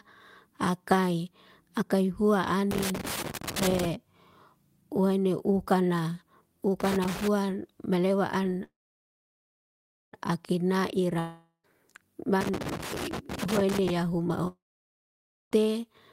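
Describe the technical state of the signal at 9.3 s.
At 9.3 s the signal is in the middle of a call audio freeze running from 8.63 to 10.15 s. The last received sound briefly continues as a fading buzz or hiss, then drops to silence for about 1.4 s. The likely cause is delayed packets draining the jitter buffer. When they arrive, the speech resumes where it stopped, so nothing is lost. Instead, a 1.5 s gap is inserted and everything after it runs late.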